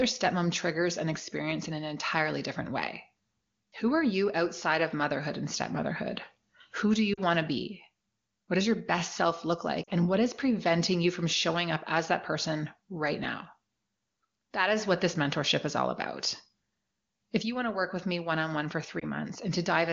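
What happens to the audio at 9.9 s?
Lost AMR speech frames hit the call from 9.83 to 9.90 s. For about 40 ms, which fits two 20 ms frames, data corrupted on the radio link failed its checks. The wideband decoder filled the gap by repeating the last good pitch and vocal tract settings at falling gain. The result is a drop to near silence within the two frames before the sound returns, momentarily thin, to the clear wideband quality of the surrounding speech.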